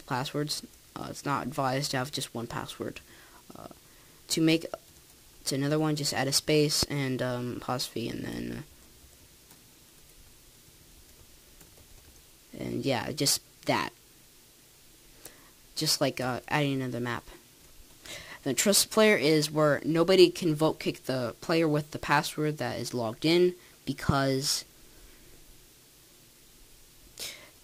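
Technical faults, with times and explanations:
6.83–6.85 s and 24.09–24.12 s, loud pop: a single sharp thump roughly 15 dB above the sound, which carries on underneath, unlike a dropout; likely a voltage pulse from a plug, switch or static.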